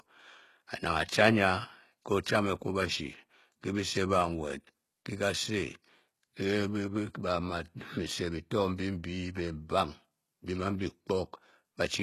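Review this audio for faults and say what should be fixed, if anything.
The treble of this speech is unnatural from start to finish: s sounds come out gritty and lispy with a metallic sheen, and nothing is present above 12.3 kHz. This is likely HE-AAC compression, which codes only the lower spectrum and synthesises the highs by copying lower bands upward under a coarse envelope, so the harmonics across the crossover don't match the original. The damage is plainly audible and points to a very low bitrate, around 16 kbps. To prevent it, export or stream at a higher bitrate, or use plain AAC or a lossless format.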